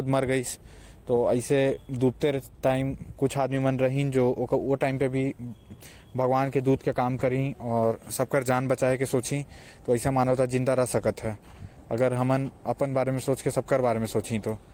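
At 1.71 to 1.73 s there is a lost packet rebuilt from error correction: 20 ms of speech is replayed from the low-bitrate copy carried in the next packet, so there is no gap, but the sound turns briefly rougher and noisier. The same happens at 3.51 to 3.57 s and 7.19 to 7.25 s (40 ms each) and at 10.27 to 10.37 s (60 ms).

Between 1.75 and 1.79 s, a short concealed packet loss follows. About 20 ms never arrived, and the decoder extended the preceding sound for 13 ms before blending back, heard as a brief smear or wobble.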